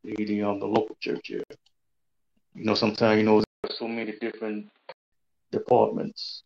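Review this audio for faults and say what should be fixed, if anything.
A Bluetooth stall, likely caused by interference holding up packets until the headphone buffer ran dry, pauses playback from 1.44 to 1.50 s. The sound drops to about 70 ms of silence, then resumes. A short, interference-free link or a larger receive buffer would prevent this.

From 3.44 to 5.12 s the input likely switched to a poorer device, a headset call profile or another microphone. After a 200 ms gap the sound turns dull, with nothing above 4.6 kHz, about 5 dB quieter, with fresh noise about 40 dB down. Locking recording to one input prevents this.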